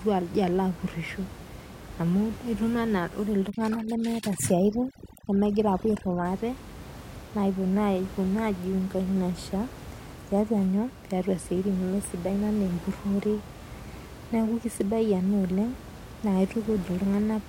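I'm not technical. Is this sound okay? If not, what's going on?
No. From 3.50 to 6.25 s there are twinkling specks in the near-silent background: overdone noise removal, cutting out quiet parts of the voice along with the room's background noise.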